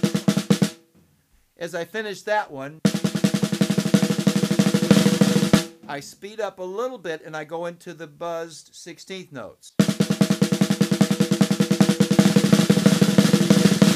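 An electrical switching spike at 3.42 s, a sharp snap peaking around -25 dBFS, likely an arc from a nearby switch or motor picked up by the audio line.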